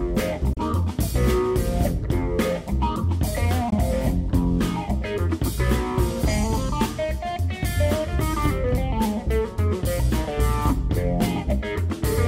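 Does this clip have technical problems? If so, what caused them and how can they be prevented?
Yes. Two brief silences occur, at 0.53 to 0.58 s and 3.70 to 3.74 s, after which the sound resumes as though it had kept playing underneath. This is likely a Bluetooth dropout: packets arrived late and were discarded, a gap consistent with one or two lost frames each time. Keeping the headphones close to the source, with no obstructions or competing 2.4 GHz traffic, reduces this.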